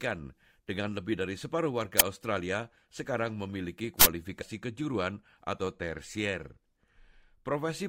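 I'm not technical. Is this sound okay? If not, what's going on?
No. At 2.00 s, just after "lebih dari separuh", and again from 4.01 to 4.05 s, after "sekarang memiliki", there is first a loud crack and then a burst of digital noise. That is an uninitialised buffer: a chunk of playback memory went out before real sound filled it, fitting blocks of 512 and 2048 samples.

At 4.41 s the speech jumps forward. That is compressed frames skipped: roughly 70 ms of audio, about three 24 ms frames, never got played.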